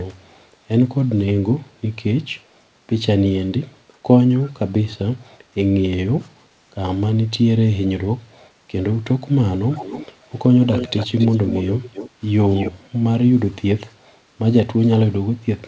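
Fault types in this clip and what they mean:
Echo leak: a faint copy of the speech returns 275 ms late, three times between 9.7 and 12.7 s. Likely loudspeaker pickup the canceller missed.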